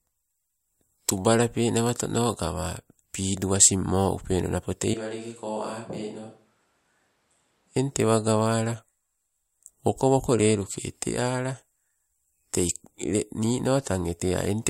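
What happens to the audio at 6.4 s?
Between 4.94 and 7.76 s, after "upeno napo tei" and until "eng tewa", comes a switch to a distant microphone, likely because the close one dropped out. The sound turns roomy, hollow and thin, about 10 dB quieter. Unlike a plain level dip, the room character changes, abruptly both ways.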